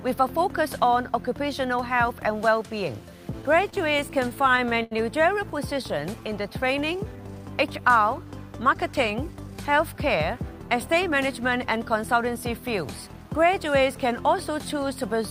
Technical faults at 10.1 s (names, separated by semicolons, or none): jitter buffer speed-up